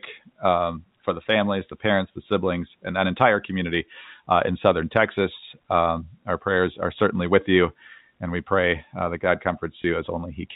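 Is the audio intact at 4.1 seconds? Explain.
Yes, the audio at 4.1 seconds is intact: the speech passes through G.711 telephone coding, with its 4 kHz ceiling and faint level-following quantisation noise, and there is no fault at that moment.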